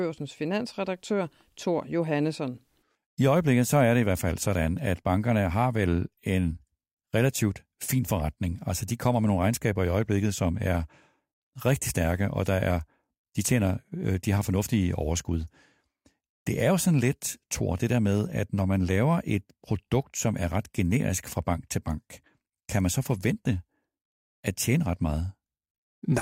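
No technical faults can be heard anywhere in the recording.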